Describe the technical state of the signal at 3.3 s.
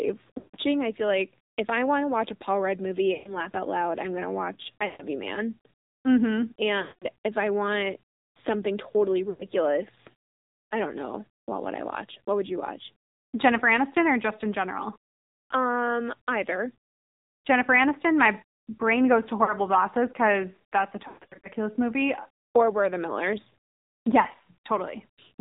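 At 3.3 s the audio sits inside a burst of lost AMR speech frames running from 3.14 to 3.34 s. The decoder stretches the last valid pitch and vocal-tract settings with falling gain, so the speech smears, warbles and decays toward silence. The gap is consistent with six missing 20 ms frames. Under this, the AMR narrowband mobile codec applies throughout. Content stops at 4 kHz, and the speech has a plainly audible buzzy, synthetic quality, which fits a low bitrate of around 7.4 kbps.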